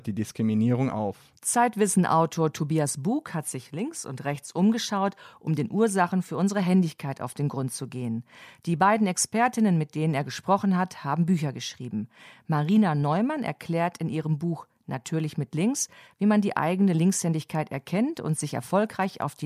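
No technical faults occur at any point, so there is nothing to describe in time order.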